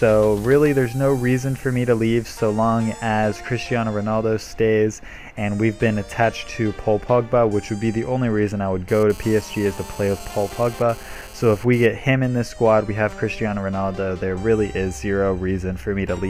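From 8.88 to 11.86 s a GSM phone buzz intrudes, a hard, raspy 217 Hz rasp about 21 dB below the sound. Radio bursts from a nearby handset transferring data are rectified by the audio circuit. A spectrogram shows evenly stacked harmonic lines; the waveform carries a regular pulse train.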